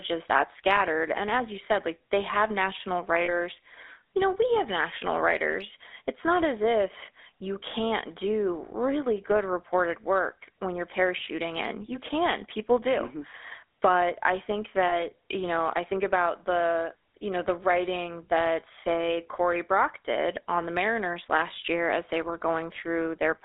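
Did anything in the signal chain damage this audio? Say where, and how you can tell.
Yes. At the codec stage, GSM full-rate coding runs through the whole clip, with a plainly audible buzzy, gravelly roughness on the speech. A spectrogram shows energy confined to roughly 300 Hz to 3.6 kHz and a coarse, pulse-regular texture. That fits a 13 kbps coder rebuilding the voice from sparse regular excitation pulses.

At the network stage, lost GSM frames appear at 3.24–3.33 s, after "like they have national", and at 14.88–15.0 s, between "I think" and "you know I think". Each dropout lasts about 40 ms, which points to two missing frames. The decoder repeated the last good frame, heard as a brief metallic ring. The waveform shows a repeated cycle, and the spectrogram shows frozen horizontal bands.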